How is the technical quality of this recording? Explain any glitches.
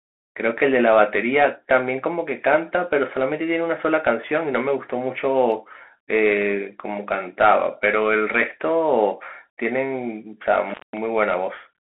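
The technical quality is poor: the whole recording carries narrowband headset coding, and there is one dropout near the end.

Bluetooth CVSD headset codec, throughout: the speech passes through a 250 Hz to 3.4 kHz band, typical of a headset link, and the damage is plainly audible. The encoder sends one up-or-down bit per sample at 64 kbit/s with an adapting step. Fast loud peaks overrun that step, so sibilants turn scratchy over a grainy hiss. A spectrogram shows a hard ceiling at 3.4 kHz and a granular noise floor.

Intermittent contact, from 10.70 to 10.98 s: a loose plug or cable briefly lost connection, and the signal was open for about 197 ms. The speech drops out with crackles where contact breaks and returns, leaving faint hiss. On the waveform this appears as a near-flat gap bracketed by sharp spikes. The spectrogram shows a dark column with broadband vertical streaks at its edges.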